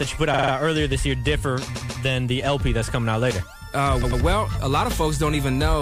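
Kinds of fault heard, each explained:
Repeated frames: A short block of encoded audio gets decoded more than once, so the same slice plays back to back. Here it stutters three times. At 0.33 to 0.51 s a 46.4 ms block plays four extra times, which fits two frames. At 1.74 to 2.02 s a 139.3 ms block repeats twice. At 4.02 to 4.21 s a 92.9 ms block repeats twice. The clip grows by about 0.65 s.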